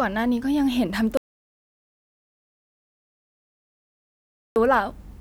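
At 1.17 s the speech breaks off mid-flow and the track drops to silence until 4.56 s, when it resumes just as abruptly; about 3.39 s of audio is simply missing. This is an audio dropout to silence, likely from the input being lost while recording continued and filled the gap with silence. Unlike a natural pause or a noise gate closing, no room tone or hiss survives, and there is no fade at either edge.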